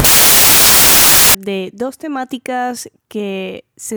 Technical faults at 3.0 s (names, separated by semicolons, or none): none